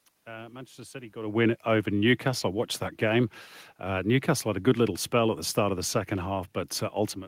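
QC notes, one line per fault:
Nothing stood out on listening to this speech recording; the room's background noise and the change in level near 1 second as the talker shifts position belong to the recording itself.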